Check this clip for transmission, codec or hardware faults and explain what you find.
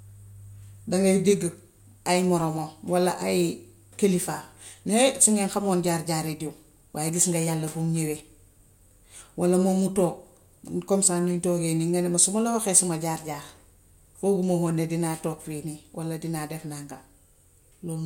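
No transmission, codec or hardware fault is audible anywhere in this speech recording.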